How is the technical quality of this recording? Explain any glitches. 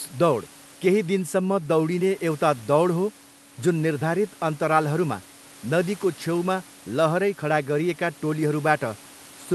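No glitches can be heard anywhere in the recording. A low background noise from the room sits about 27 dB below the speech, and that is part of the recorded space rather than anything the system introduced.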